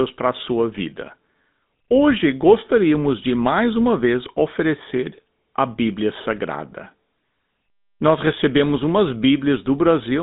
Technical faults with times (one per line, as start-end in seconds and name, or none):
0.00-10.22 GSM full-rate codec